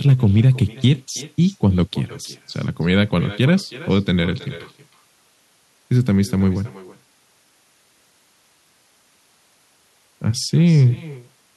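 From 0.09 to 0.91 s the speech shows hard clipping. The signal runs only about 1 dB past what a stage in the chain can carry, so just the highest peaks are sliced flat. The result is brief crackle on the loudest moments rather than a continuous fuzz. Unlike codec distortion, which smears texture evenly, this grit appears only where the waveform peaks and vanishes between them.

Throughout the clip there is also echo with no canceller. The far end plays the call over a loudspeaker, its microphone picks it up again, and nothing strips that copy out, so the speech returns after the network round trip. A thinner repeat sits about 21 dB below the original and trails it by roughly a third of a second. Room reverberation would blur into a continuous tail. This is a distinct, delayed second copy.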